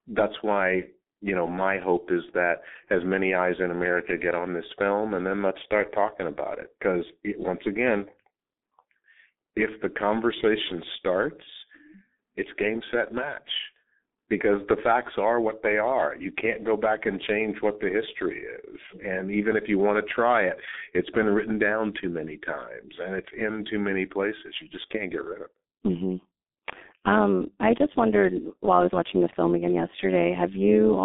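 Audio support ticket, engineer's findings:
G.723.1 codec, throughout. Muffled, hoarse speech, smeared consonants; heavy damage, consistent with about 6.3 kbit/s coding in 30 ms frames. Spectrogram: band roughly 200 Hz to 3.6 kHz, blank above 3.8 kHz.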